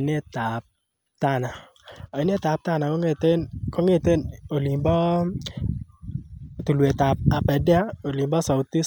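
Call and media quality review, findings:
Call and media quality review findings: no faults found in the speech audio.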